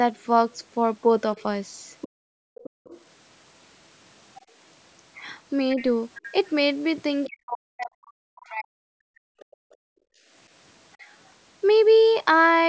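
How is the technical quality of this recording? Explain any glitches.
The speech in this call recording has several echo-canceller faults and a constant DC offset, with the microphone path's bandwidth ending at 8 kHz.

The DC offset is present throughout. The waveform sits shifted off zero by a constant amount. It is inaudible, but it wastes headroom and puts steady energy at the very bottom of the spectrum.

The other side's voice leaks through from 1.38 to 3.01 s, 5.78 to 5.84 s and 9.39 to 9.75 s. A second voice is faintly audible, well below the main speech and faintest in the last instance, likely loudspeaker echo the canceller failed to remove.

The background is gated by the echo canceller from 2.08 to 2.84 s and 9.26 to 11.07 s, with drops of about 40 dB. A shallower dip of about 8 dB occurs at 4.41 to 4.55 s. The canceller clamps the microphone, so the room sound vanishes and then returns.

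Speech is suppressed in double talk from 7.26 to 8.98 s. The talker's speech drops deeply, likely because both sides spoke at once and the canceller attenuated everything.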